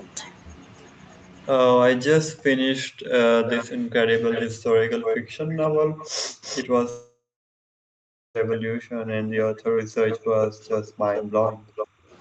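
Speech clip, carried over a call path with nothing above 8 kHz. From 2.04 to 12.15 s the speech is pushed down and chopped, for about seven seconds in all, dipping by up to about 40 dB. This is likely speech suppressed in double talk by the echo canceller. A delayed copy of the voice returns at 3.47 to 3.65 s, 4.32 to 4.47 s and 5.02 to 8.81 s, lagging 329 ms and only about 5 to 10 dB down. Another copy runs from 10.09 to 11.86 s, lagging 441 ms and about 10 dB down. This is likely echo leak from a loudspeaker. From 6.89 to 8.37 s about 1.46 s of audio is lost. A fading fill gives way to roughly 1.1 s of silence, and the sound resumes without the missing part. This is likely a long network dropout.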